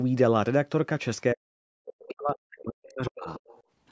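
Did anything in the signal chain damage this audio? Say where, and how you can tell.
Yes. From 1.33 to 3.39 s the speech sinks by roughly 40 dB, likely speech suppressed in double talk by the call's echo canceller.

From 3.34 to 3.63 s a faint second voice, about 25 dB below the speech, is the other side's voice leaking through, likely loudspeaker echo the call processing left behind.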